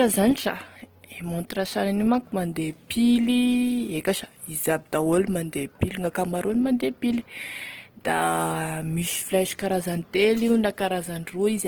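Speech throughout carries plainly audible Opus compression damage: a grainy, rough, noise-filled texture rather than MP3's swirling, hollow artefacts. Bands are filled instead of dropped, and content still reaches about 20.2 kHz. The roughness is likely from music-mode Opus at around 16 kbps.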